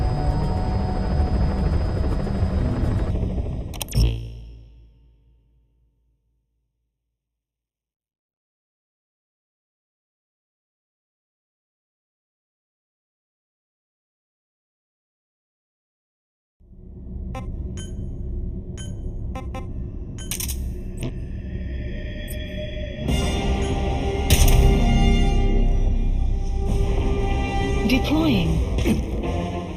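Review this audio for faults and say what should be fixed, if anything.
From 3.10 s to the end, one channel runs about a third of a millisecond behind the other before the two are summed to mono, causing channel delay (comb filtering). The shared content cancels in fixed notches starting around 1.5 kHz and evenly spaced above, leaving the audio hollow and phasey. To prevent it, keep both channels time-aligned to the sample before any mono fold-down, or take a single channel instead of summing.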